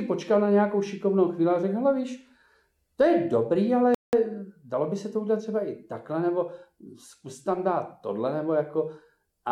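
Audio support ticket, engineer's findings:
Silence 3.95–4.13 s (185 ms). Likely Bluetooth stall: delayed packets emptied headphone buffer, playback paused until resends arrived. Clean cut to silence, not garbled or smeared sound.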